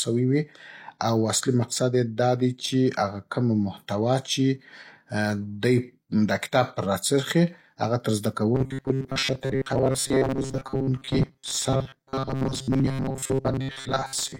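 A speech clip that, from 8.55 s to the end, right after "راڅرخي اغه تر زده", turns into a rigid metallic buzz pitched near 134 Hz that only loosely follows the speech. This is robotic sound from repeated short buffers, likely caused by audio arriving too seldom, so roughly 7.5 ms chunks are replayed, with most of the real audio skipped.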